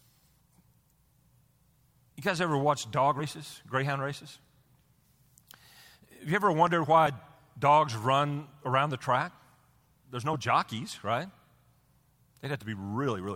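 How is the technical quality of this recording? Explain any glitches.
The recording has two kinds of glitch: repeated compressed frames skipped and a single loud pop.

Compressed frames skipped at 3.19–3.22 s, 4.63 s, 7.06 s and 10.33–10.35 s: 10 ms frames go missing, so the speech jumps ahead. The jump is roughly 50 ms between "guys ever watch dog" and "greyhound races", about 20 ms at 4.63 s, and about 10 ms at 7.06 s and before "jockeys right".

Loud pop at 6.67–6.69 s, just after "you ever": a sharp single pop peaks about 5 dB above the speech, which carries on beneath it. It is likely a voltage pulse from a plug, switch or static.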